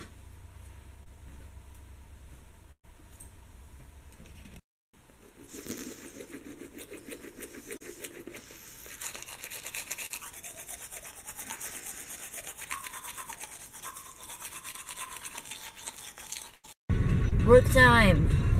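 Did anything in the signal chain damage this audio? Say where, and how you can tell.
Yes. The damage happened on the network, and the receiver's short concealed packet loss handling covered it. There are five brief glitches: 1.03 to 1.08 s, 7.77 to 7.82 s, 10.06 to 10.12 s, 14.72 to 14.75 s and 17.29 to 17.33 s. Each one is a small smear or wobble. About 20 to 40 ms of audio never arrived in time. The decoder extended the preceding sound across the hole and then blended back into the real signal.

The same network path also caused two bursts of packet loss, at 2.72 to 2.85 s and at 16.55 to 16.65 s. In each, the receiver carried the last sound forward and let it fade. In the first burst it fades to silence for about 80 ms. When the audio resumes, it has jumped ahead. About 120 ms is missing at the first burst and about 80 ms at the second. Several consecutive packets were lost, which was too much for concealment to hide.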